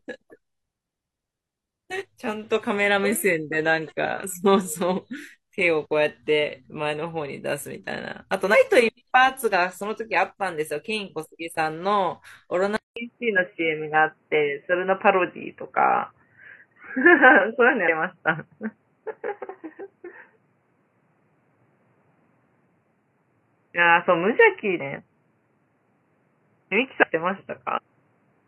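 At 8.50 s the speech jumps forward, with compressed frames skipped: roughly a third of a second drops out. From 12.76 s, after a brief gap of about 200 ms, the sound goes dull and boxy, with nothing above 3 kHz, a level shift of around 5 dB, and new background noise about 45 dB down. That's likely the input switching to a poorer device. More skipped frames follow at 17.84 s (about a fifth of a second lost), 26.99 s (about half a second) and 27.73 s (around a whole second). Each one is a hop whose size fits multiples of a frame of about 46 ms.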